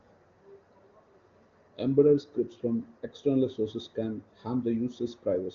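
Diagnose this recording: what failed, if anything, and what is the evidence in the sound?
Nothing in the recording points to a failure at any stage of the chain. The speech carries the band limit of the AMR wideband (HD Voice) codec, with nothing above about 7.3 kHz and little or no audible coding damage, which fits one of its higher bitrates.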